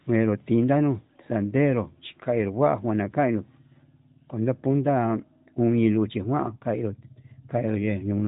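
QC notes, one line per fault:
No faults are heard in this speech clip. The AMR narrowband mobile codec path is audible as a band limit with nothing above about 3.8 kHz and only light codec coloration, which fits its 12.2 kbps mode.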